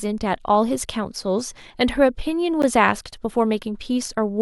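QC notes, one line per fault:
2.62 s, block of digital silence: 12 ms of silence with abrupt edges, heard as a tick; flat waveform gap, vertical spectrogram streaks at both edges.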